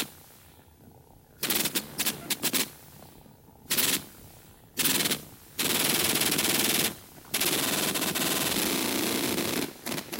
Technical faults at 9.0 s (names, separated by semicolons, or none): none